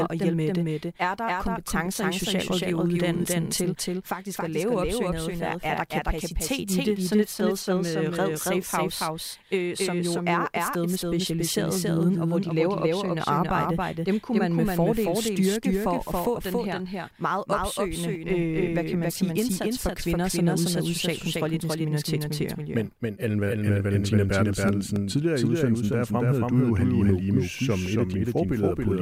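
A doubled audio track runs throughout the clip. Every stretch of speech is followed roughly 300 ms later by a second, equally loud copy with no decay or room colour, producing a hard slapback. The likely cause is the signal being captured twice, once through a slower path.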